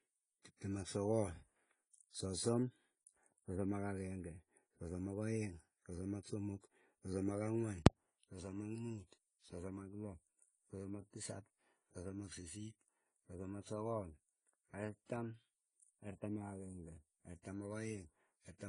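Speech throughout, sounding dull with plainly audible codec damage and nothing above 10 kHz. The likely cause is AAC compression at a low bitrate, around 24 kbps: AAC-LC quantises each frame's frequency lines coarsely and lowers its cut-off, discarding the upper band.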